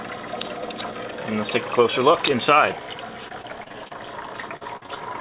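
From 3.28 to 3.95 s, and again from 4.41 to 5.02 s, repeated packet loss (robotic sound) chops the audio. Short holes, the longest 27 ms and then 46 ms, are filled by extending the preceding sound. The result is a choppy stutter that keeps recurring across each span, unlike a single isolated dropout.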